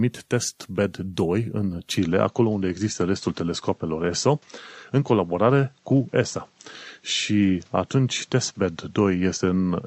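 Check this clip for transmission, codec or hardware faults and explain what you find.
One fault is present: the input switched to a poorer device at 1.97 s and stayed there until the end of the clip. From that point nothing above 7.9 kHz comes through, so the speech loses its air and sibilant sparkle and turns duller, with no gap at the changeover and no real jump in loudness. A faint new background noise, well below the speech, arrives with it. The likely cause is the system moving to a narrower-band microphone mid-recording.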